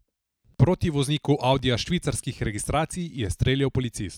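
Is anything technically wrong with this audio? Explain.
Yes. CD scratch ticks run from 1.07 to 3.43 s in this speech. Ten short ticks recur about four times a second, the longest a few milliseconds. A scratch defeats error correction once per disc revolution, so the player interpolates or mutes those samples.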